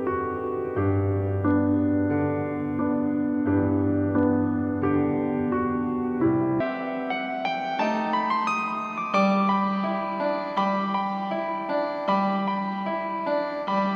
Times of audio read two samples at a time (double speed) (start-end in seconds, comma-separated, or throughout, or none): 6.60-13.96